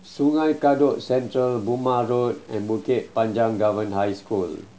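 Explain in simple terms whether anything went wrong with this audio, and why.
A grainy noise runs through the speech from start to finish, and even the pauses carry a faint grainy noise. The likely cause is a stuck bit, where one digital bit jams and pushes many samples off by a small fixed step. Unlike steady background hiss, this noise follows the sound's shape.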